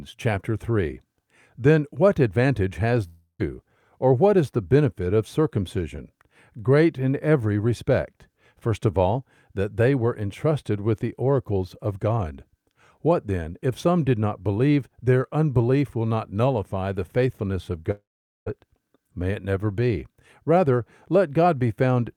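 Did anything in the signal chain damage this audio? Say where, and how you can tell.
Yes, two gaps that are most likely a long network dropout, at the network stage. At 3.07 to 3.41 s, right after "what advantage has", the sound smears into a fading buzz, ends in about 0.12 s of silence, and resumes with about 0.32 s of speech gone. At 17.91 to 18.48 s, after "nullify the faithfulness of", about 0.56 s is lost, mostly silent. The decaying fill and missing content separate this from a short packet-loss click or a natural pause.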